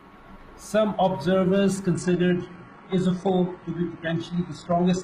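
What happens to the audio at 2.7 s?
At 2.7 s the adaptive stream is playing a lower-bitrate version. The connection slowed, so from 1.94 s to the end of the clip the player switched down from a higher-bitrate rendition to a much leaner one, and the sound points to a drop from roughly 96 kbit/s to about 12 kbit/s. The change is sudden but leaves no gap. The speech loses its treble, with nothing above 11 kHz.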